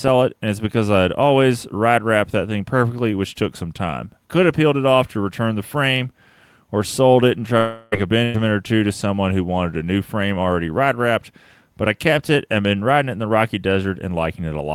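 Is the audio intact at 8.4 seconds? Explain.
No, not quite. The audio around 8.4 seconds has just come out of a burst of packet loss running from about 8.24 to 8.37 s, ending right before "or two to someone". Several packets in a row never arrived in time, so the receiver kept extending the last sound for about 100 ms, letting it fade rather than falling silent. Then it jumped ahead, and about 100 ms of the original audio is simply gone. A burst differs from a lone dropout by that stretched, dying tail and the skip that follows it.

Inside that stretch, at 8.34 s, one 20 ms packet was a lost packet rebuilt from error correction. The following packet carried a low-bitrate duplicate of it, and the decoder played that copy, so there is no gap at that point. You hear a brief patch that is coarser and noisier than its surroundings. Compared with concealment, which guesses from the previous sound and fades away, this rebuilt frame contains the actual content, just at a lower quality.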